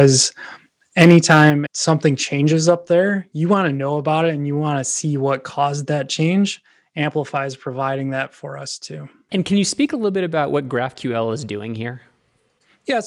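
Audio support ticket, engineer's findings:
Microphone overload at 0.0–0.06 s and 1.0–1.5 s. Harsh, crackly edge on the loudest bits, worst in the second stretch. Likely the mic input gain set too hot, so peaks slam the converter ceiling and get their tops sheared off. That's about 2 dB over in the first spot and about 6 dB in the second, with around 1% and 5% of samples flattened.

Microphone volume stepped down at 1.5 s, right after that second distorted run. Everything, voice and background, drops by about 6 dB in one hit. Looks like the call software likely caught the clipping and yanked the device input level down a notch.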